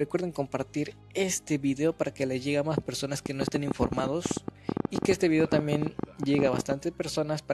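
From 3.26 to 6.73 s, a train of clicks ticks irregularly at about 15 per second, some 50 pulses peaking well above the sound, likely interference injection.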